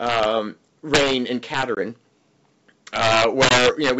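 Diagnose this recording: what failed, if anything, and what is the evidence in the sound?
Violent, harsh cracks tear through the loudest speech at 0.07–0.25 s, 0.94–1.13 s, 1.54–1.63 s and 2.96–3.90 s. This is integer overflow in a gain or sample-format conversion stage. Peaks pushed about 2 dB, then about 6 dB, past full scale wrap to the opposite sign instead of being limited.

Hard-edged 20 ms silent holes open at 1.75 s and 3.49 s, each followed by slightly distorted speech as it resumes. This is packet loss on an ADPCM call at the network stage, probably a couple of packets each time. The G.722 decoder's predictor and step size then drift out of step with the sender until they resettle.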